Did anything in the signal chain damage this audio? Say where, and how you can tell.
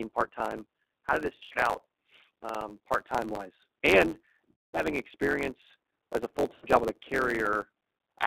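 Yes. The G.729 codec affects the whole clip at 8 kbit/s. The line band runs only from about 250 Hz to 3.7 kHz, and the speech sounds plainly rough and synthetic. The codec rebuilds each frame from a vocal tract filter, a pitch predictor and a few pulses rather than the real waveform.

A block size mismatch (truncated) between the driver and buffer stages runs throughout. It shows as a steady 91.9 Hz buzz, and the speech runs 1.07 times fast at roughly normal pitch. A stage writing longer blocks, which fits 512-sample blocks, is losing the tail of each one.

On the network side, VoIP packet loss concealed by the speech codec occurs at 1.36–1.58 s as scattered dropouts, at 4.51–4.84 s, and at 6.54–6.67 s. In each, the decoder stretches its last pitch and filter into a buzzy tone or coloured noise that fades, and the sound stays weak until it rebuilds.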